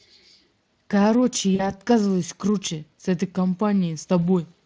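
Around 1.55 s there's a short stretch of VoIP packet loss concealed by the speech codec, running to about 1.71 s. Roughly 40 ms of audio went missing, which fits two dropped 20 ms frames, and the decoder covered the gap by repeating its last pitch and spectral shape at falling gain. You hear it as a brief buzzy or noisy smear that fades, with the recovery lingering slightly, over the light coding damage of the Speex codec.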